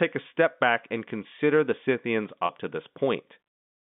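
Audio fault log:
2.46 to 2.49 s, packet loss with pitch repetition: about 30 ms of the speech drops out, which fits a single lost packet, and the receiver fills the hole by looping the last pitch period it got. Because the gap is so short, you hear it as a brief, slightly held buzz rather than a silence, sitting on top of the narrow telephone band of the G.711 line.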